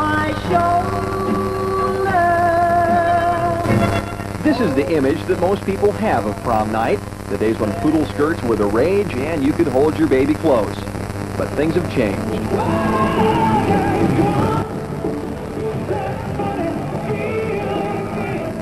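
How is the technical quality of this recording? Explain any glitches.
Two sudden gain jumps mark the recording. At 3.64 s the level leaps up about 6 dB, then drops back at 4.01 s. At 14.62 s it falls about 6 dB and stays down. Sound and noise floor move together, likely from gain applied without a ramp.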